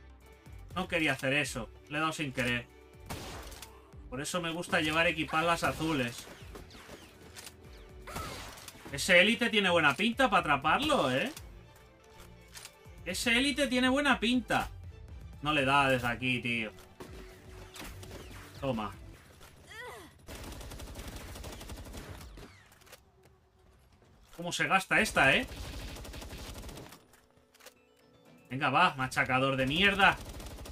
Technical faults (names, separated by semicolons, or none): dropped samples